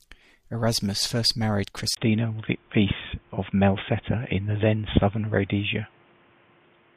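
At 1.95 s a 20 ms waveform gap precedes boxy speech, likely an input switched to a poorer device; spectrogram energy stops at 3.6 kHz.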